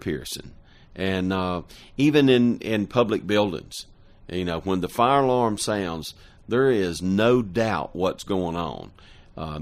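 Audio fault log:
Nothing to log here: the speech comes through with no dropouts, glitches or other faults to flag anywhere in it.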